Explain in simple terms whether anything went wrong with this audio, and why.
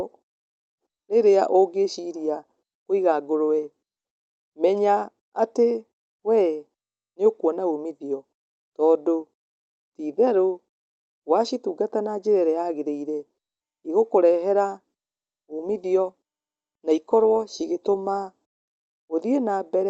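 Nothing went wrong with this audio; the speech simply comes through a normal call connection, with the usual dulling of the higher frequencies that such calls have.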